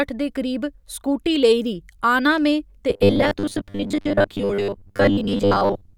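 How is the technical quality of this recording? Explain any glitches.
The first half is clean, but from 2.90 s to the end at 5.97 s the speech turns into robotic sound from repeated short buffers. About half the audio is being replaced by repeats of the most recent chunk, likely because new audio arrives too slowly. The 100 Hz buzz points to roughly 10 ms segments looping. The speech becomes a stiff metallic drone that still loosely tracks the words. On a spectrogram, this shows as evenly spaced horizontal lines at multiples of 100 Hz. In the waveform, identical blocks recur every 10 ms.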